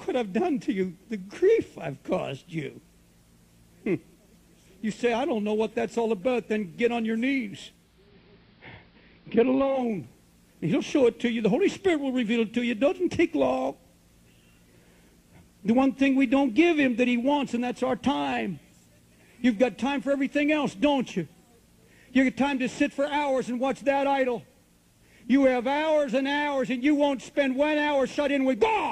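Digital radio blending to analogue occurs from 7.68 to 9.99 s. The hybrid receiver lost its digital stream and cross-faded, over about 0.45 s, to the station's AM analogue broadcast. After about two seconds it faded back to digital. During the analogue stretch a hiss sits roughly 40 dB below the programme, and the sound takes on the narrower bandwidth of AM reception. The overall level stays the same across both blends.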